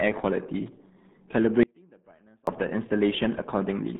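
RealAudio 14.4 codec, throughout: the speech has been squeezed through a low-rate dial-up codec, which fits 8 kbit/s, and nothing above 3.8 kHz survives. The band sits roughly between 150 Hz and 3.7 kHz, so sibilants and consonant edges are gone. The heavy coding damage leaves the voice muffled and gargly, with a watery, smeared texture where the model struggles to rebuild the spectrum from so few bits.

Audio dropout to a faint residue, from 1.63 s to 2.47 s: the speech cuts out abruptly for about 0.84 s and returns just as suddenly, rather than pausing or fading. The gap is not silent. It holds a faint trace of sound far below the normal level, about 35 dB down. The likely cause is that the signal feeding the path was lost while everything downstream stayed live and kept passing whatever small leakage remained.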